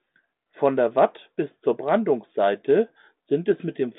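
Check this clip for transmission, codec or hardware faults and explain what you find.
No faults turned up anywhere in this clip.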